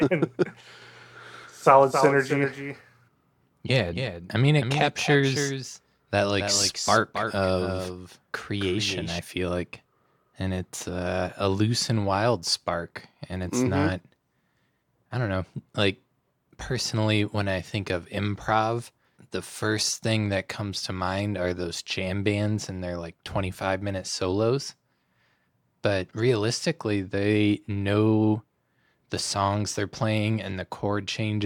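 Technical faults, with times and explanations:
1.43–9.19 s, doubled audio track: the speech is likely being captured a second time through a slower path, so a dry, full-band copy trails about 300 ms behind at about 5 dB lower, cutting in and out abruptly and ending just before "feel like".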